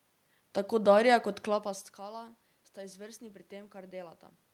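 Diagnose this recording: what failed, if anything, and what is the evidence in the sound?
Nothing failed in this recording, and the sound gives no evidence of a fault at any stage.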